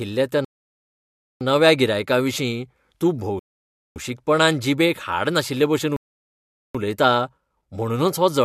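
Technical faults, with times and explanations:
0.45–1.41 s, 3.39–3.96 s and 5.96–6.75 s, rebuffering stall. The speech cuts to silence three times, for 0.96, 0.57 and 0.78 s. The player ran out of downloaded audio and waited for more. Each time, playback resumes exactly where it stopped. Nothing is lost, but time is added.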